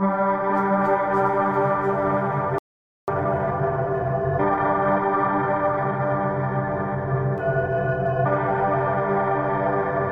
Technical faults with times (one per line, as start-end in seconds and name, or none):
2.58-3.08 playback stall
3.08-6.08 time-compressed catch-up